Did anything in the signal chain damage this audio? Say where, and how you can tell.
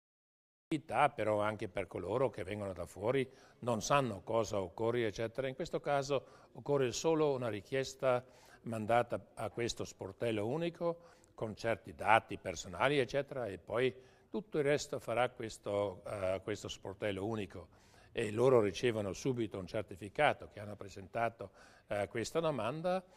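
Yes, a cut-off start: capture began late, leaving flat silence until 0.72 s, then the waveform jumps in mid-sound, a hard vertical spectrogram edge.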